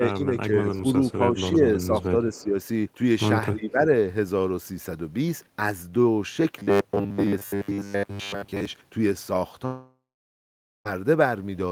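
Between 0.26 and 0.85 s, 1.14 and 1.4 s, 1.87 and 2.55 s, and 3.55 and 3.79 s, the speech dips in level, which is speech suppressed in double talk. The likely cause is an echo canceller that treated the talker as echo while both ends spoke and turned the signal down. The drops are about 10, 5, 5 and 15 dB at their deepest, with 150 to 400 milliseconds affected each time. On the waveform the envelope narrows briefly, and the spectrogram loses energy.

From 2.34 to 2.45 s there is a faint echo leak. A delayed copy of the voice, about 30 dB below the speech and 298 ms late, likely slipped past the far end's echo canceller. It shows as a weak, smeared repeat of earlier spectral patterns.

From 6.59 to 8.65 s the voice has a robotic sound from repeated short buffers. Most of this stretch is short slices being replayed, likely because packets arrived too seldom. The repeats impose a fixed 100 Hz buzz, which fits a 10 ms buffer. 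The spectrogram shows rigid, evenly spaced horizontal harmonics instead of moving formants.

From 9.65 to 10.87 s a long network dropout hits. About 1.2 s of audio is lost. The concealment stretches the last sound into a fading buzz or hiss, followed by roughly 850 ms of near silence, which appears as a flat gap in the waveform and a blank spectrogram before the speech resumes.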